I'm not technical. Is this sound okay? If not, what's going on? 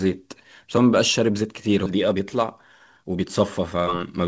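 No. At 1.86 s there is a skip ahead: about 0.7 seconds of speech is dropped, and playback jumps straight to later speech with no gap.

From 1.91 s to 4.18 s there is a jitter buffer speed-up: tiny slices are repeatedly trimmed out, so speech runs about 18% faster at the same pitch and sounds hurried.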